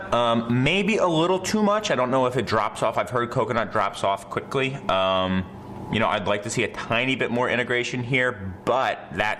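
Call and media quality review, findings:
No faults found in this clip. Nothing audible to escalate or attribute to any component.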